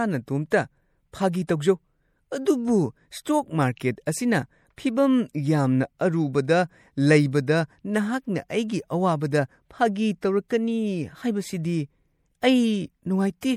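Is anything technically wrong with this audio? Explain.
Yes. Throughout, the speech has plainly audible MP3 compression damage, likely from a low-bitrate encode, which fits about 64 kbps: content stops above 17.8 kHz, and starved frequency lines flicker with a watery, swirly texture. At 1.47 s there is pre-echo: a sharp onset falls late in a transform block, so quantisation noise spreads about 17 ms ahead of it as brief hiss, softening the attack.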